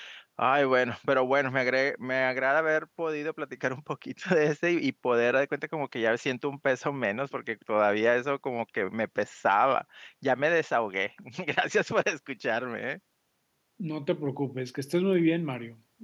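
No technical faults are audible.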